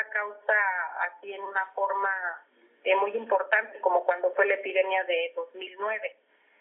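No faults can be heard anywhere in the clip.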